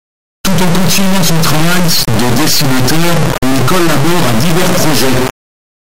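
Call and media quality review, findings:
Integer read as float, throughout: speech replaced by loud buzzing square wave jumping to the clipping limit, silent in quiet gaps. Fits 32-bit integer samples read as 32-bit float. Not ordinary clipping, since output only jumps between zero and the clipping limit.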